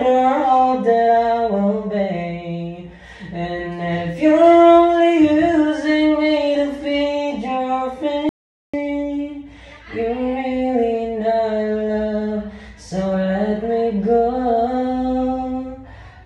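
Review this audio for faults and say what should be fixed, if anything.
The input path was lost for a moment, most likely through a loose connection or a brief mute, while the recorder kept writing silence. The result is an audio dropout to silence from 8.29 s to 8.74 s: the sound cuts off mid-flow and about 0.44 s of dead silence follows, with no room tone underneath, before the sound resumes abruptly. Whatever occurred in that gap is gone and can't be restored by processing. To prevent it, secure cables and connectors, watch the input meters while recording, and rerecord the affected passage.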